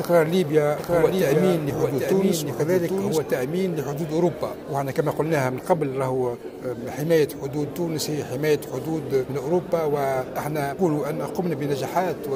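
From 0.80 to 3.18 s a doubled audio track appears: a dry, full-band copy trails roughly 0.7 s behind, somewhat quieter, likely from a second, slower capture path.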